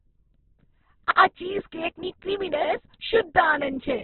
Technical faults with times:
0.00-4.04 Opus compression

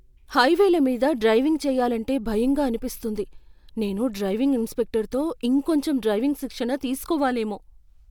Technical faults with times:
none

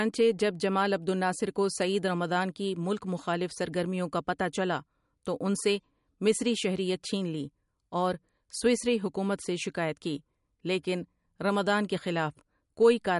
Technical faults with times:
0.00-13.20 MP3 compression

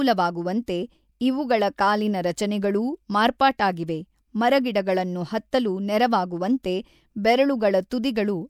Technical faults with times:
0.66 pre-echo
6.63 pre-echo
7.90 pre-echo

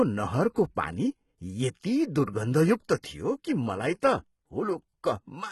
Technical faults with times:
0.00-5.52 HE-AAC compression
0.55 pre-echo
3.02 pre-echo

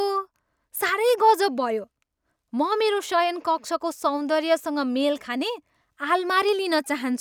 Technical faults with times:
none

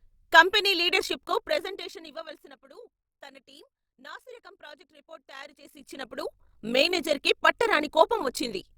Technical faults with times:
0.90-8.77 overlap-add ripple

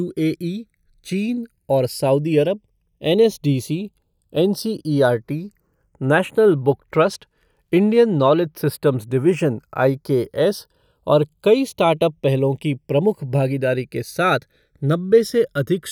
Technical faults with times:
0.00-15.91 channels drifting apart

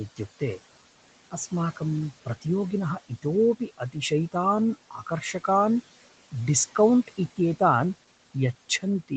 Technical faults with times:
0.00-9.17 noise suppressor artifacts
3.60-3.96 speech cut by the noise suppressor
4.91-5.48 speech cut by the noise suppressor

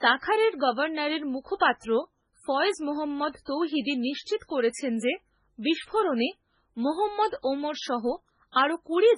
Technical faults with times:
0.00-9.18 MP3 compression

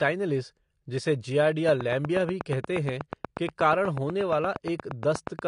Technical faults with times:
0.00-5.47 AAC compression
1.69-5.40 train of clicks

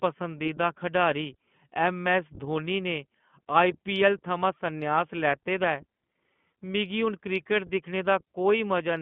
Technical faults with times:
0.00-9.02 iLBC codec

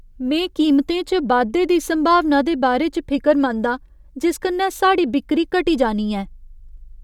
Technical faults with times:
none

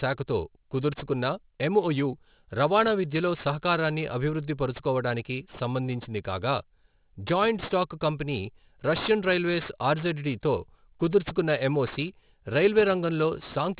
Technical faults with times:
0.00-13.79 aliasing

